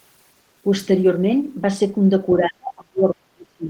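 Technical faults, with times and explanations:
2.38–3.69 s speech suppressed in double talk: level sinks unevenly, about 35 dB at worst, rather than cutting cleanly, likely an echo canceller ducking overlapping talk.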